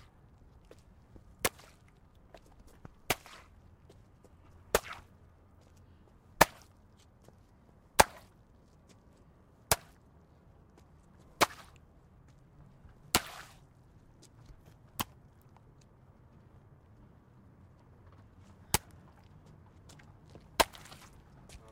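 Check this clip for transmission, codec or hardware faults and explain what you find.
Nothing here stands out as a transmission, codec or hardware problem, so there's nothing to flag in this recording of sounds.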